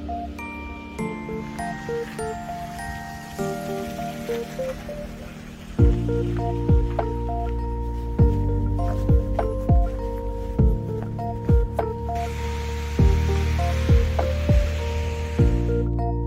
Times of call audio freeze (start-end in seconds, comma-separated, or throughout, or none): none